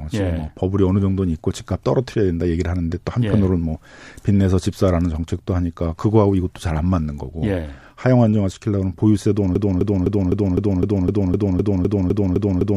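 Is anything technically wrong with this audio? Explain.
Yes, there is a broken-record loop. From 9.56 s to the end, one 0.25 s fragment stutters 13 times, likely from a stalled stream resending its last buffer. The waveform shows identical, evenly tiled blocks.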